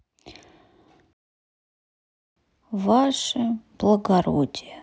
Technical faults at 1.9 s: playback stall

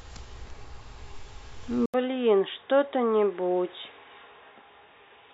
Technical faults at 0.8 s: none

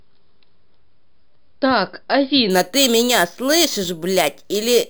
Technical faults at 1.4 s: none

